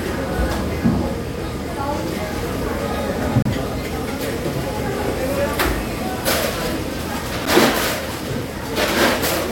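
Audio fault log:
3.42–3.46 s and 7.45 s, gap between stream segments: roughly 30 ms and 10 ms silences about 4 s apart where segment timestamps misalign. The waveform drops flat with hard edges, and the spectrogram shows a blank vertical stripe across all frequencies.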